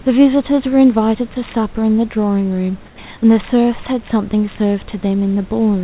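From 2.86 to 2.98 s the background falls by about 6 dB and turns flat and featureless. This is likely comfort noise in place of the background, synthesised by the receiver while the sender paused. A spectrogram shows an even, textureless grey band below 4 kHz.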